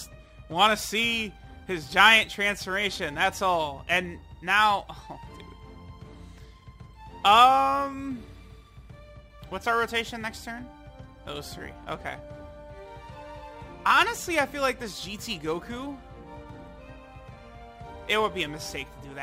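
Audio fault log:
Throughout, crude rate conversion: the grit sounds like a 44.1 kHz to 48 kHz conversion done by just grabbing the nearest sample, so some samples get doubled up in a repeating pattern instead of being properly filtered and interpolated. That timing jitter throws off tones that have nothing to do with the actual content, sitting roughly 25 dB under the signal, so you hear an inharmonic fizz riding on the louder and brighter moments.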